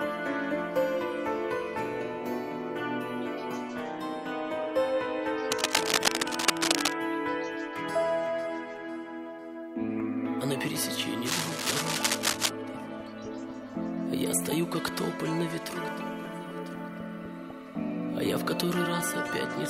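Two bursts of cable scratch noise break into the audio, from 5.52 to 6.96 s and from 11.25 to 12.50 s, heard as rough scratching over the sound. The first sits about 5 dB above the signal and the second roughly level with it. On a spectrogram each shows as a dense, ragged broadband smear. The waveform shows jagged, irregular spikes. The likely cause is a worn cable or connector being moved, rapidly varying its contact resistance.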